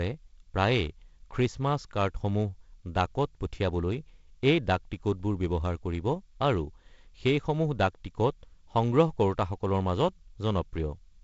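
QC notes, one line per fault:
No faults are heard in this speech clip. The G.722 wideband telephone coding is audible as a ceiling with nothing above 7.7 kHz and a light grain from the coding, which fits the 48 kbit/s mode.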